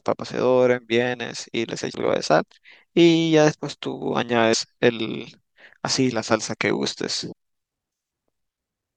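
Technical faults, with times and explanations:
1.91 to 1.96 s, 4.53 to 4.55 s and 7.31 s: damaged data in a compressed stream. Corrupt frames make the decoder misread them and resynchronise, so each is a brief glitch.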